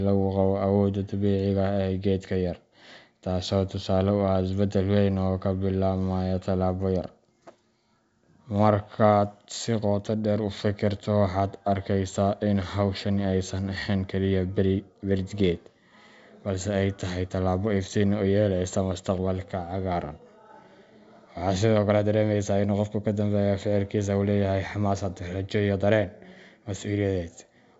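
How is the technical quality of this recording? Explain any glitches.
The technical quality is good, with no glitches to explain in this wideband telephone speech.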